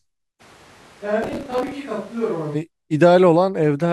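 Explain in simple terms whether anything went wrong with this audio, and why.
Two things went wrong. From 0.42 to 2.54 s, the recording likely stopped using the close microphone and picked up sound from one further away instead, a switch to a distant microphone. The speech suddenly turns roomy and hollow, loses its low warmth, drops noticeably in loudness, and has more background noise around it. At 2.54 s the close, fuller sound snaps back just as abruptly.

Between 1.23 and 1.72 s, inside that stretch, the processor fell behind. It handles audio in tiny chunks of roughly 5 ms each and missed about thirty deadlines over that stretch. Each time, it replayed a leftover scrap of old audio with sharp edges, so you hear processor overload crackle: a gritty, tearing burst laid over the speech that stops once the processor catches up.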